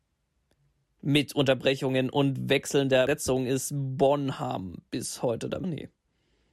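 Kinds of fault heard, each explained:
Damaged data in a compressed stream: corrupted frames make the decoder lose sync, causing brief blips at 3.07 s, just after "und wechselnder", and 5.63 s.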